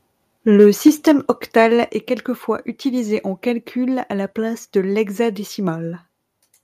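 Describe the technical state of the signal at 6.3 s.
Around 6.3 s the audio is intact, with nothing wrong in the signal at that moment.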